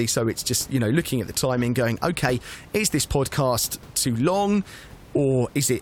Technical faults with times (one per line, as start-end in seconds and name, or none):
none